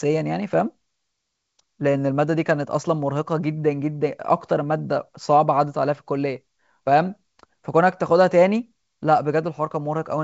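No technical faults can be heard in this speech. It carries the sound of G.722 wideband telephone coding, with a full, clear band that stops at about 7.7 kHz and nothing above it.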